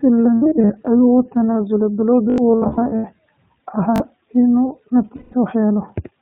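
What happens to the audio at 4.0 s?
A short, buzzy stutter runs from 3.96 to 4.0 s, where a tiny slice of sound repeats with a hard join at each restart. This is a repeated buffer: fresh audio arrived late, so the last chunk, which fits a 20 ms buffer, played twice more, and about 40 ms of real audio was lost.

Over the same moment the speech has the slightly rough, synthetic, band-limited quality of the iLBC codec, which runs through the whole clip at 15.2 kbps. It codes each 20 ms frame independently and passes nothing above 4 kHz, and the damage is plainly audible.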